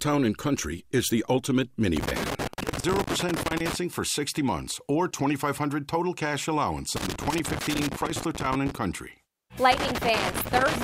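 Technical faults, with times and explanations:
1.97–3.75 s, 6.96–8.75 s and 9.72 s to the end: loose connector crackle, three irregular bursts of scratchy crackle, each lasting roughly one to two seconds. A worn or dirty contact in the signal path is making and breaking as it shifts, so the sound is chopped on and off many times in quick succession. Any DC on the line jumps at each break and adds pops, which gives the bursts their ragged texture.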